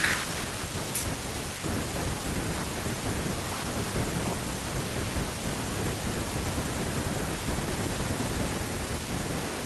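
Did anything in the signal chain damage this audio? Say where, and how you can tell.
No, nothing along the way seems to have touched this speech recording, so there's no damaged stage to point to.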